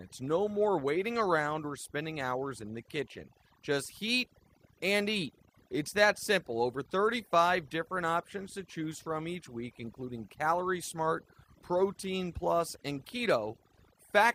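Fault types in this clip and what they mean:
overdone noise removal: throughout, aggressive noise reduction switches off frequency bands near its noise estimate, leaving a lowered background with twinkling specks and taking quiet parts of the voice with it.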